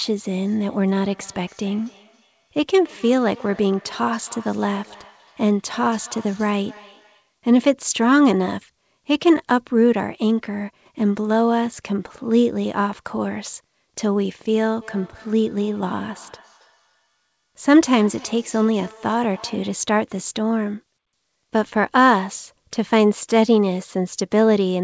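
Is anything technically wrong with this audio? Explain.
Yes. Feedback echo between two devices occurs from 0.42 to 7.3 s and again from 14.81 to 19.88 s. Two devices in the same room share the call, so one microphone picks up the other's loudspeaker, which neither echo canceller removes. The sound comes back roughly every third of a second, at most about 25 dB below the speech, each repeat thinner and more ringing.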